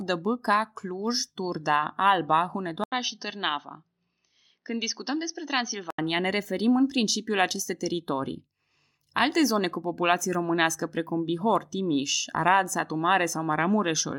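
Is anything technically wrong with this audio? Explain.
Yes. From 2.84 s to 5.98 s the input appears to switch to a poorer device, likely a change of microphone or a headset falling back to its call profile. The replacement path passes nothing above 6.2 kHz, so the speech turns dull and boxy, drops about 5 dB in level, and carries a new noise floor roughly 55 dB below the signal. An 80 ms silence marks the switch, just before "ne referim în principiu", and the fuller sound returns at 5.98 s.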